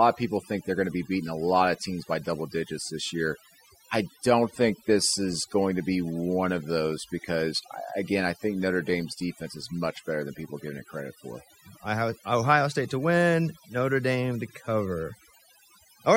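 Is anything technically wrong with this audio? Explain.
Yes. Overdone noise removal runs throughout the speech clip. A noise reduction stage set too aggressively cuts individual frequency bands down whenever they sit near its noise estimate, and quieter parts of the voice get cut along with the noise. Pauses drop and break up into twinkling specks.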